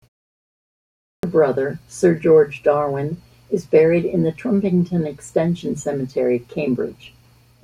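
The output device slept through the 0.79 s of opening silence and needed time to wake, so about 440 ms of speech vanished: a clipped start after a pause, 0.79 to 1.23 s.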